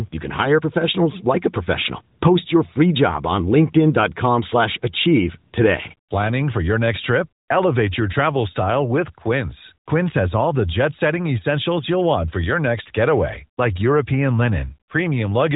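No technical faults can be heard in the speech. It comes through the AMR narrowband mobile codec path, with nothing above about 3.8 kHz and only light coding roughness, which fits the codec's 12.2 kbps top mode.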